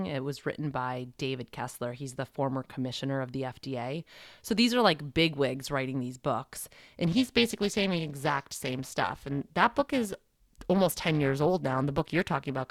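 From 7.04 s to the end of the clip, periodic clock jitter appears. Interference is shaking the converter's sampling clock at a steady rate of around 400 Hz, so each sample is taken slightly early or late in a repeating pattern. Every component of the speech picks up sidebands spaced about 400 Hz above and below it, strongest on the higher frequencies. The result is a rough, metallic edge riding on the voice that drops away in the pauses.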